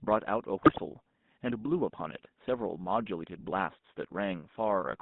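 The whole clip carries that GSM full-rate codec buzz: a gravelly, rasping edge on the speech, and the band squeezed to roughly 150 Hz to 3.7 kHz, so it's thin and boxy. Coarse pulse excitation through a vocal-tract model sounds like this, fitting the 13 kbps full-rate scheme.

From 0.6 to 0.81 s there's a burst of GSM bit errors. The speech breaks into squawks and gargly pops as corrupted filter, pitch and gain values throw the spectrum and level around, which points to roughly ten frames getting hit on a weak link.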